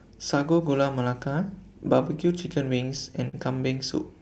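Speech over a call path whose packets arrived late between 2.85 and 3.35 s, so the jitter buffer ran dry four times. These repeated stalls (stutter) were filled by stretching the preceding sound, about 76 ms in all and the longest 45 ms, which makes the speech drag and stutter without losing content. The band-limited sound, with nothing above 8 kHz, fits an Opus call codec.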